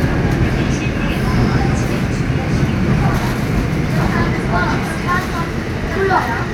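A recording of everyday sounds, with no technical fault to be heard anywhere in it. There is nothing here that needs a time or a cause attached.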